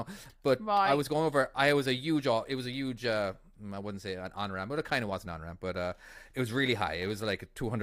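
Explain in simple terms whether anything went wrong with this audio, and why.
Nothing went wrong here.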